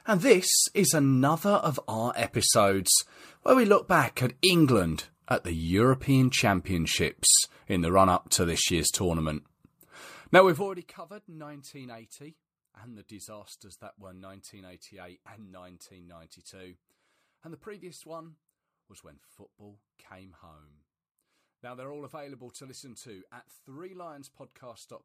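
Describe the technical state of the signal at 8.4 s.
At 8.4 s the speech signal is intact, with no fault to be heard at that moment.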